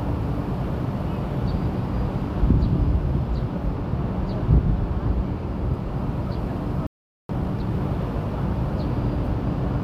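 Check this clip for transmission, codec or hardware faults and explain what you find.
Two playback faults sit close together near the end of this recording of sounds: a stall followed by a burst of hurried catch-up.

Playback stall, 6.87 to 7.29 s: the player most likely ran dry of buffered data or had its output thread held up, so nothing reached the speaker for about 0.43 s. The sound breaks off abruptly mid-flow, leaving a clear hole of silence before anything resumes.

Time-compressed catch-up, 7.29 to 7.71 s: to clear the backlog the stall built up, the player trims short fragments from the queued audio and cross-fades the remaining pieces together, running at twice normal speed. Because it drops material rather than speeding up playback, pitch stays where it should. What comes through is rushed.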